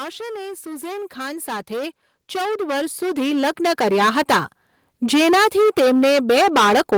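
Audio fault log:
throughout: hard clipping. The speech is driven about 20 dB past what the stage can pass, so roughly a third of all samples are cut flat, giving harsh fuzz on every loud sound. The waveform shows squared-off plateaus at both rails, and the spectrogram shows dense harmonics smeared far up the spectrum.
0.63 to 4.42 s: automatic gain rising. The gain control judged the input too quiet and raised it by about 16 dB over nearly four seconds, so speech and background swell together. The waveform envelope climbs steadily, and the spectrogram brightens across every band, noise floor included.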